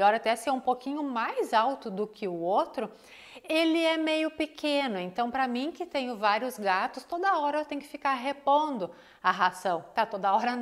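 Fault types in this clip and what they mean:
Nothing to flag here; I didn't hear a single technical fault anywhere in it.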